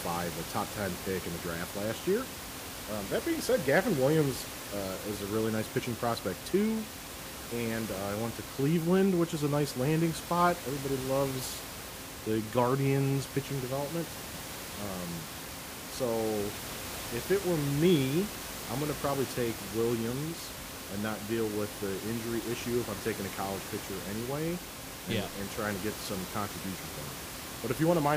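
A speech recording with room noise sitting about 10 dB below the speech, and nothing technically wrong with it.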